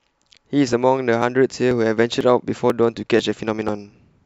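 At 0.73, 1.22, 1.71, 2.21, 2.70, 3.19 and 3.69 s the speech skips forward, likely audio missing between chunks: a few milliseconds vanish at each half-second boundary and the edges butt together. Unlike a dropout, there's no silent gap, and the strict regular spacing gives it away.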